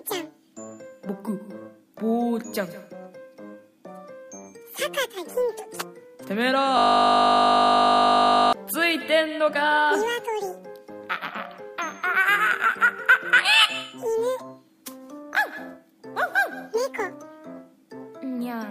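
At 6.78 s the system hang loop strikes: the computer or its audio driver stalls, but the sound hardware keeps replaying the last 20 ms of its ring buffer, which fits a 20 ms buffer. That one sliver repeats about 88 times until 8.53 s, and because it cycles 50 times a second, the audio collapses into a steady, flat 50 Hz buzz for nearly two seconds before normal playback returns.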